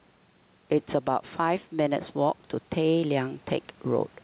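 Gain pumping runs through the whole speech clip. The gain swings by roughly 5 dB. The sound is squashed. The likely cause is input gain set far too high, with a fast limiter pulling it back.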